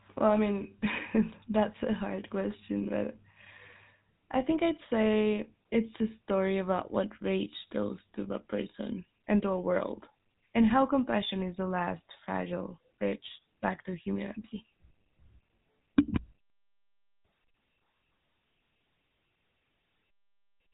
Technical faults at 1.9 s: GSM full-rate codec

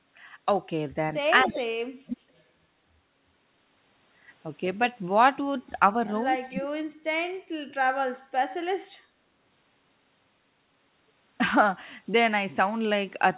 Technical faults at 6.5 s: speech suppressed in double talk; echo leak

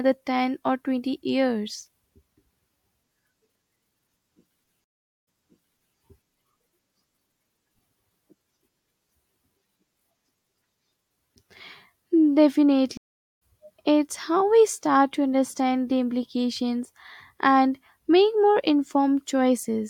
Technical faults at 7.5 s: none

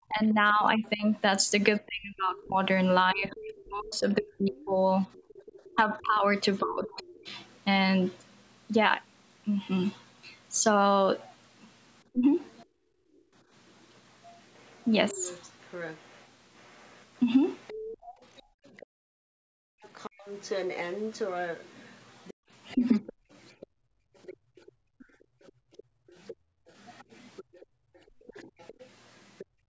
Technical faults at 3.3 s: speech suppressed in double talk; other side's voice leaking through

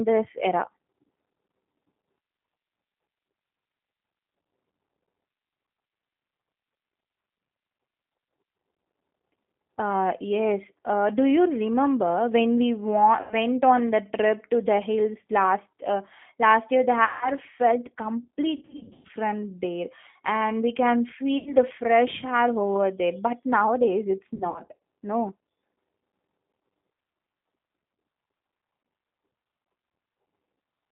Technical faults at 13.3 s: G.729 codec; VoIP packet loss concealed by the speech codec

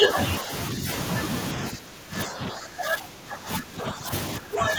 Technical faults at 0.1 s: speech suppressed in double talk

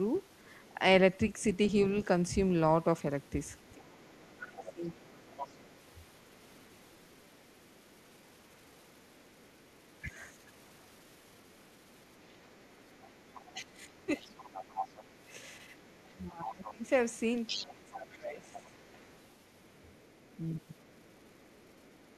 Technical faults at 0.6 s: other side's voice leaking through

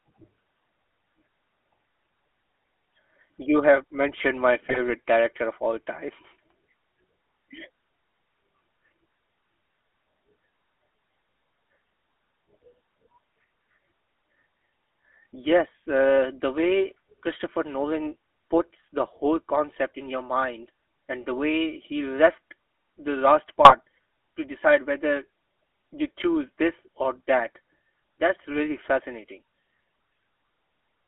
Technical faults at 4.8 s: GSM full-rate codec; GSM bit errors

